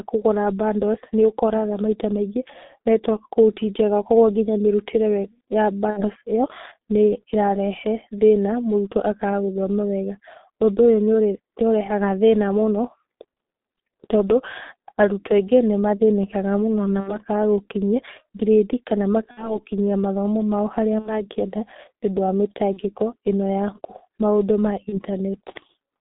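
The whole recording passes through the G.723.1 codec, and the damage is heavy. The band runs only from about 200 Hz to 3.7 kHz. The speech sounds muffled and hoarse. Consonants smear because the coder updates its model of the voice only every 30 ms. The muffled, hoarse texture fits a rate near 6.3 kbit/s.

VoIP packet loss concealed by the speech codec breaks in six times. The first is at 5.90 to 6.04 s. The second is at 17.00 to 17.19 s, between "nĩ mathĩnĩkaga mũno na" and "gũkinyia grade kana". The others fall at 19.31 to 19.64 s and 20.99 to 21.22 s. The last two come right after "nĩũndũ wa" at 22.73 to 22.80 s and after "maũndũ ma" at 24.89 to 25.00 s. Each time the decoder repeats its last pitch and filter and lets the level sink. This gives a brief, fading stretch of the last sound. The longer gaps fit two 30 ms frames lost, and the last two fit one. The voice stays weak for a moment after each gap before it recovers.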